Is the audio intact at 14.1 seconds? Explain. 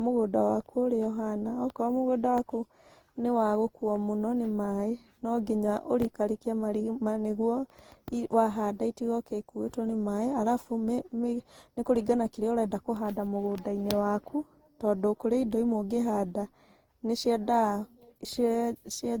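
No. Generation loss affects 14.1 seconds, as it does the whole speech clip, likely from roughly seven rounds of decoding and re-encoding with a lossy codec whose character fits Opus at around 48 kbit/s. Each pass quantises on a shifted frame grid, so noise and spectral gaps accumulate. The speech sounds swirly, smeared and hollow, with blurred attacks, though content still reaches about 20.2 kHz.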